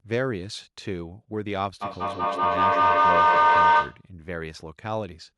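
At 1.82 s a feedback howl starts and runs to 4.08 s. Two devices in the same room are joined on one call. Sound from one loudspeaker reaches the other microphone and comes back louder on each pass. The repeats build instead of dying away. They narrow to a tone near 1 kHz, pulsing about every fifth of a second. At its peak it stands about 11 dB above the speech.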